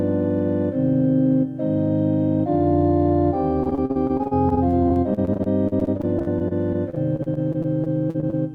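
From 3.63 to 8.34 s, repeated packet loss punches dozens of holes up to 48 ms, patched with repeated sound: robotic chop, smeared spectrogram streaks.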